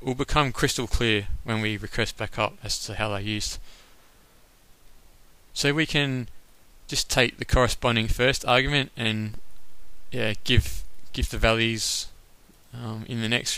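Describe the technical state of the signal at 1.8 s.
At 1.8 s the signal is intact, with no audible fault at that moment.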